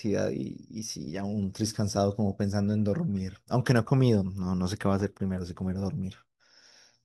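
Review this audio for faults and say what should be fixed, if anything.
Nothing in this audio needs to be fixed, as no faults are present.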